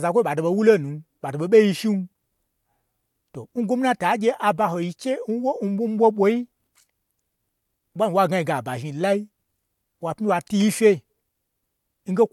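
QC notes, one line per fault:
No fault to log in the QC notes for this speech clip.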